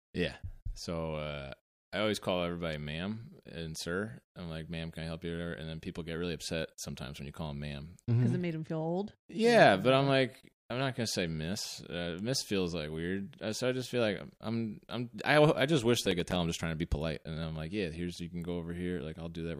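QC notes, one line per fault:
16.06–16.36 s, processor overload crackle: after "I I just wish", the speech breaks into gritty crackle until "I'm just trying to". Several buffers missed their deadlines in a row. Each left a hard-edged silent gap, which fits buffers of around 5 ms.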